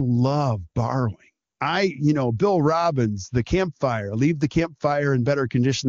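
No technical faults occur anywhere in this speech, which comes through an AMR wideband (HD Voice) codec at a rate high enough to keep it clear.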